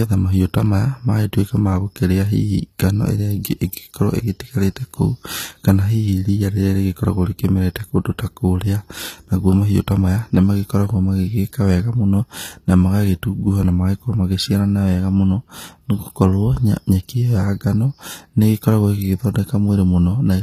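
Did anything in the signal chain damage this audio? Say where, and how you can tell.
Yes. The damage sits at the codec stage and runs through the whole speech clip. The treble sounds bright but synthetic. Sibilants come across gritty and lispy, and the top end stops dead at 15.5 kHz. That points to HE-AAC compression, likely the v2 variant at a low rate near 24 kbps. The encoder kept only the lower band and rebuilt the highs by copying lower bands upward under a coarse envelope. The copied harmonics no longer line up across the crossover.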